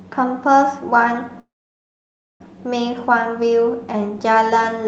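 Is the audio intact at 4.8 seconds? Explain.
Yes, at 4.8 seconds the speech comes through intact, with only the ordinary coding character of the call path and no fault at that moment.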